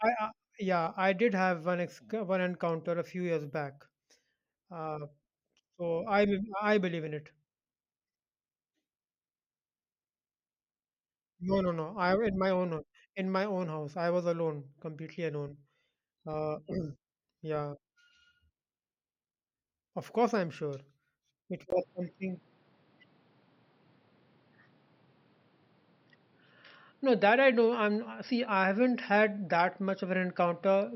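At 21.70 s, after a 20 ms gap, the speech turns dull and boxy through to the end at 30.96 s, with nothing above 5.6 kHz, a small level shift and a faint new noise floor. The input likely switched to a poorer device.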